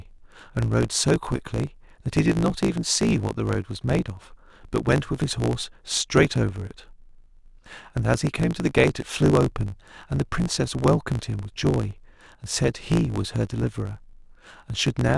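Throughout the speech runs with a block size mismatch (truncated): one stage hands over longer blocks than the next reads, so each block's tail is discarded. That leaves a steady buzz at about 54.4 Hz, the block rate, and the speech hurries along about 1.09 times too fast. Unlike a resampling error, the pitch stays roughly normal; unlike random dropouts, the gaps are perfectly regular.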